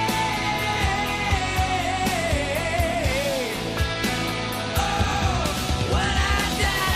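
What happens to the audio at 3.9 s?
Nothing goes wrong at 3.9 s: the audio runs through that point intact, with no dropout, click or other fault.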